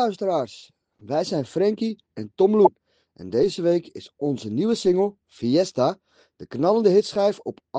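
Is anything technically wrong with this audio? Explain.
Yes. From 2.63 to 2.69 s there is damaged data in a compressed stream: corrupted bytes make the decoder misread frames and lose sync until it finds the next frame header. The roughly 60 ms disturbance is a short glitch where the decoder loses its place.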